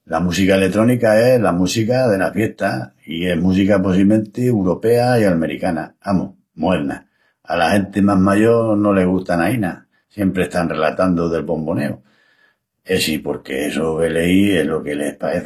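Throughout, the speech shows likely HE-AAC compression, consistent with about 24 kbps: s sounds turn gritty and metallic rather than dull, and nothing sounds above 14.9 kHz.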